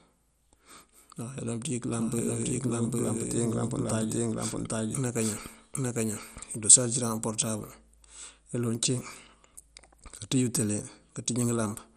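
From the start and throughout, the speech sounds dull and gurgling, with a grainy edge. Nothing is heard above 14.9 kHz. This is likely MP2 compression, where starved upper sub-bands switch off and the rest are coarsely quantised. The damage fits a rate around 64 kbps.

From 1.91 s to 6.67 s, a second copy of the speech runs about 0.7 s behind, at roughly the same level. It is dry, without decay or room colour, and starts and stops abruptly. This is a doubled audio track, likely from a second, slower capture path.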